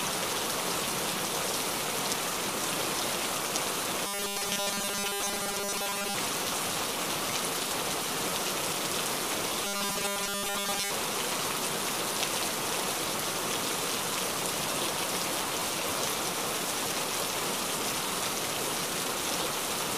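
From 4.07 to 6.15 s, and again from 9.65 to 10.91 s, the sound turns into robotic sound from repeated short buffers: a rigid, metallic buzz fixed at 200 Hz that only loosely tracks the underlying audio. The likely cause is input arriving too slowly, so playback fills the gaps by looping the most recent fragment, which fits a period of about 5 ms, for most of each stretch while the real material is dropped.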